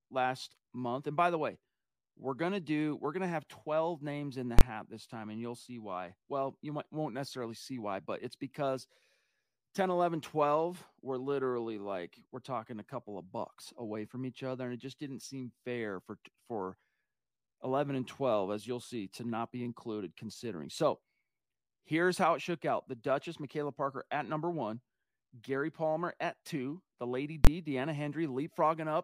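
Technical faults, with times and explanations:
4.59–4.61 s and 27.45–27.47 s: invalid numbers at full scale. Each time, a calculation yielded infinite or invalid values that were clamped to maximum level for 23 ms, consistent with a 1024-sample block. That briefly replaces the speech with one loud bang.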